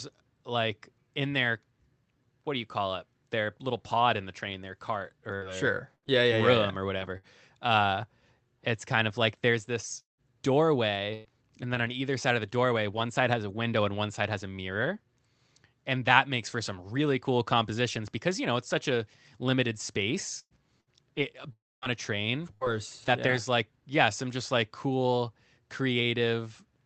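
Between 5.35 and 13.01 s, brief ticks and smears break through the sound. These are scattered short gaps: about seven lost packets, the longest near 200 ms, each patched by extending the preceding sound. From 20.39 to 23.33 s the audio turns choppy, with pieces missing. This is repeated packet loss, with three gaps, the longest 115 ms, concealed back to back. Within that stretch, from 21.52 to 21.85 s, a short fading buzz gives way to about 250 ms of silence before the sound resumes with a piece missing. A long network dropout is the likely cause, with no packets arriving for roughly 300 ms. Throughout, the sound is carried through an Opus call path with its top end capped at 8 kHz.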